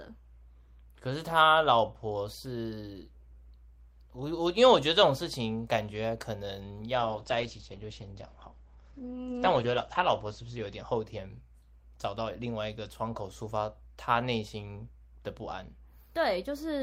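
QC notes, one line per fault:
7.01–12.07 s: call bitrate drop. The bandwidth estimate fell and the encoder was pushed from 32 kbps down to 10 kbps, sitting at that floor for 3 s. Coarser coding and a band limit cut from 20 kHz to 8 kHz leave the speech muffled and rough until the rate recovers.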